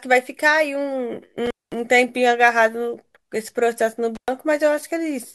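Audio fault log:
1.46–1.75 s and 4.15–4.28 s, intermittent contact: the speech drops out twice as a loose connection in the signal chain briefly opens, for about 0.21 s the first time and 0.11 s the second. Each break starts and ends with a crackle as the contact scrapes apart and back together. While the line is open the programme signal vanishes, leaving only a faint hiss from the still-connected stages downstream.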